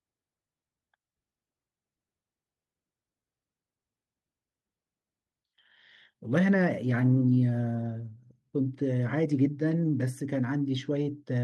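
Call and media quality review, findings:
No call or media quality faults found in this speech clip.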